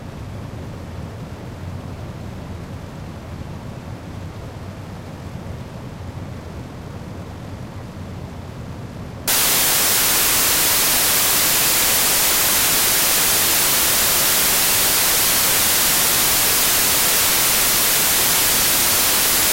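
From 9.28 s to the end, samples built from the wrong bytes: misassembled byte order promotes the noisy low bits, producing loud, harsh noise, close to white on loud sounds.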